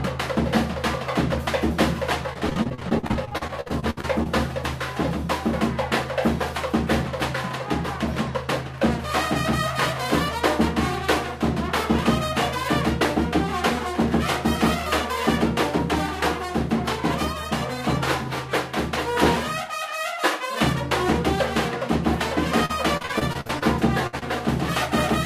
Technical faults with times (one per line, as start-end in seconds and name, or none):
2.33-4.27 repeated packet loss (robotic sound)
22.65-23.63 repeated packet loss (robotic sound)
24.07-24.15 burst of packet loss
24.19-24.23 short concealed packet loss